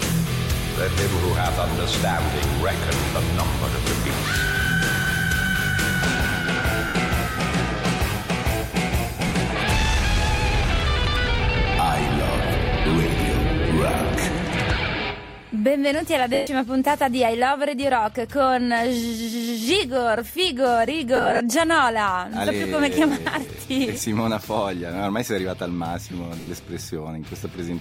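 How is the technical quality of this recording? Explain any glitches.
The recording has repeated dropouts from lost LE Audio frames, at 6.88 s (70 ms), 9.27 s (50 ms), 16.34 s (130 ms), 21.16 to 21.40 s (gaps scattered over 240 ms, runs up to about 50 ms) and 26.40 s (70 ms). The LC3 decoder fills each gap by repeating the last spectrum with randomised signs and fading it, so tones smear into noise and longer gaps dim. On a spectrogram this shows as blurred, harmonic-free patches. The waveform shows a noisy, decaying envelope.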